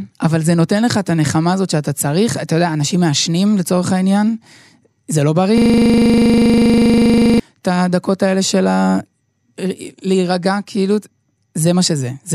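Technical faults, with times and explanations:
5.58–7.40 s, system hang loop: the same 40 ms slice of speech repeats exactly, some 45 times, at a steady 25 Hz, giving a rattling buzz rather than silence or random glitches, as the hardware kept replaying its buffer while the system froze.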